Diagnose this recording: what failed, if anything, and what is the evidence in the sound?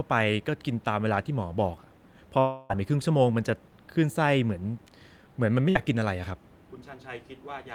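At 2.39 to 2.71 s the speech breaks into a concealment tail: the last sound is stretched into a fading buzz or hiss for about 0.3 s, with no true silence, and resumes further on with that span absent. This is likely a long network dropout at the receiver.

A burst of packet loss at 5.69 to 5.77 s, again at the network stage, removes about 60 ms of speech. The receiver fills the hole by repeating the preceding sound and attenuating it, giving a brief held buzz or fading hiss before playback jumps ahead.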